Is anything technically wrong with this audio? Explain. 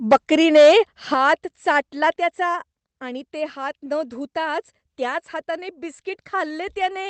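Yes. There are two faults.

Microphone overload occurs from 0.11 to 0.77 s, peaking about 8 dB over full scale. It recurs briefly at 1.27 to 1.29 s, about 1 dB over, just before "चाटला त्याचा आणि ते". The likely cause is input gain set too high, so the loudest peaks flatten against the converter's ceiling. Around a tenth of samples clip in the first stretch. Loud syllables take on a harsh, crackling edge.

Microphone volume stepped down three times. At 0.13 s the level drops by about 3 dB. At 1.14 s it drops by about 7 dB, just before "चाटला त्याचा आणि ते". At 2.16 s it drops by about 5 dB, before "त्याचा आणि ते हात". The likely cause is the call software cutting the device's input level after detecting overload. The speech and the background fall together, abruptly.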